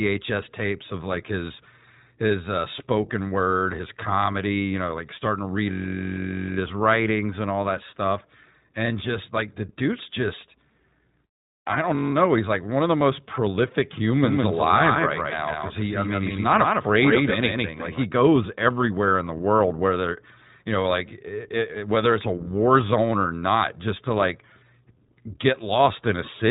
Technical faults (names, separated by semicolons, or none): iLBC codec; doubled audio track